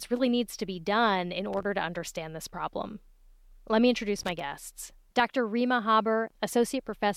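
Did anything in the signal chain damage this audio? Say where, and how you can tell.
Yes. A worn or dirty contact in the analogue wiring is making and breaking, producing loose connector crackle from 1.53 to 1.63 s and from 4.18 to 4.40 s. Each interruption chops the signal into an irregular burst of scratchy crackle.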